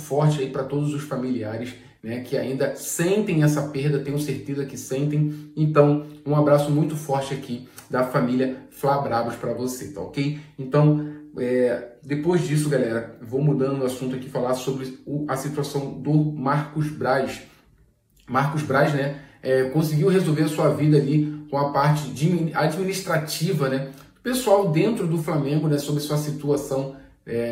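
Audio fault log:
Nothing stood out on a careful listen.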